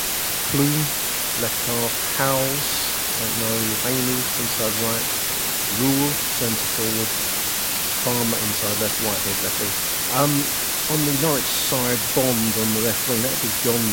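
From start to finish the speech carries low bit depth with dither: only about 3 bits, with dither added before rounding, so the error becomes a steady white hiss about 5 dB louder than the speech. Unlike undithered truncation, it stays constant through pauses and adds no gritty distortion.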